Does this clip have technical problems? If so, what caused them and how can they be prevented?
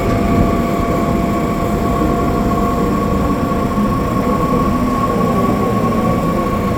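No, nothing in this recording of sounds stood out as a technical problem on listening, so there is nothing here that needs preventing.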